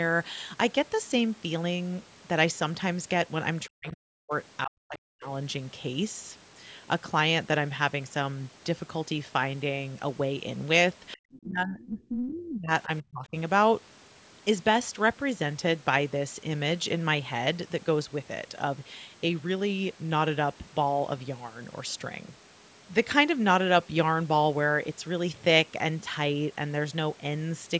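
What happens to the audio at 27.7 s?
Nothing goes wrong at 27.7 s: the speech is intact there, still carrying the normal low-bass trim of call microphone processing.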